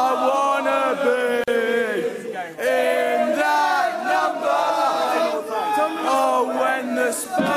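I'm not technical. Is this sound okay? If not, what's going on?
No. At 1.44 s the sound drops out for about 39 milliseconds, then carries on where it stopped. This is a gap at a join of encoded pieces. The audio was saved in separate chunks, and the short silent padding at the seam was left in.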